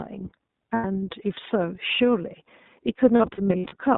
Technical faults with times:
0.00-3.97 iLBC codec
0.74-0.85 lost iLBC frames
3.16-3.75 lost iLBC frames

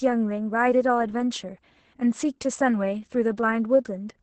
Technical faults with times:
0.00-4.22 Opus voice compression

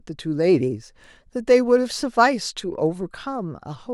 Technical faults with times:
0.78-2.28 sample clock jitter

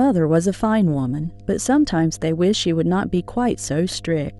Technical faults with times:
0.00-4.40 mains hum

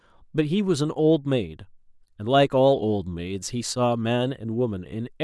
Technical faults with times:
none

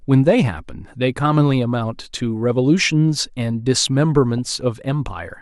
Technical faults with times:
4.38-4.61 DAB burbling

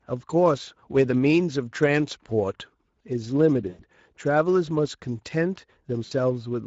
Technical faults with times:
0.00-6.67 Speex codec
3.69-3.83 VoIP packet loss concealed by the speech codec
6.05-6.12 VoIP packet loss concealed by the speech codec

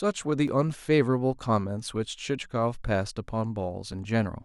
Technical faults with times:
0.48 dropped buffer (overrun)
3.92 dropped buffer (overrun)

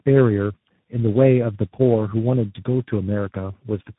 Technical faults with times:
0.00-3.98 tandem speech coding

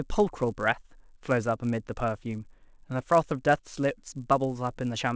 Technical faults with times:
0.00-5.16 resampler restarted on every block

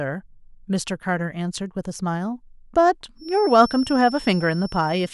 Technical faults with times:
3.15-5.13 feedback whistle

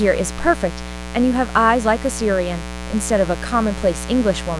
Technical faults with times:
0.00-4.59 mains buzz

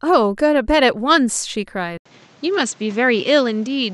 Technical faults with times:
1.97-3.94 input switched to a poorer device

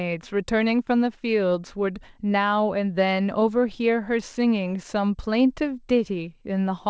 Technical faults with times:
3.40-3.43 short concealed packet loss

